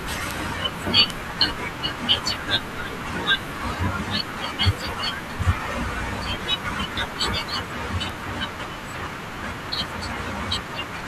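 Bit error spikes occur at 0.31 s, 1.10 s and 8.10 s in the speech: single flipped bits that make a sample jump by a power of two and snap back. Each is a sharp broadband tick unrelated to the speech, peaking at about -2, -8 and -14 dBFS. The second fits three corrupted samples in a row.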